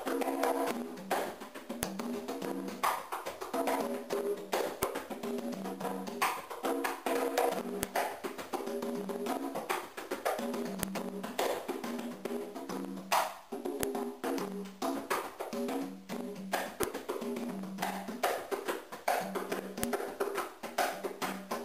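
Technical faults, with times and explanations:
1.83, 4.83, 7.83, 10.83, 13.83, 16.83 and 19.83 s, file header played as audio: sharp clicks every 3 s, right where each joined piece begins. The pieces still carry their WAV headers, so those few dozen bytes play as raw samples and snap through regardless of the sound underneath.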